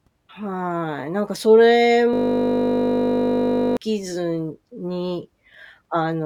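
From 2.14 s to 3.77 s the speech gives way to a steady buzz at 50 Hz. This is a system hang loop. The computer or audio driver stopped feeding new audio, and the sound hardware kept replaying the same 20 ms stretch of its ring buffer about eighty times in a row. A loop that short repeats too quickly to hear as a stutter, so the exact repetition becomes a buzz pitched at the loop rate.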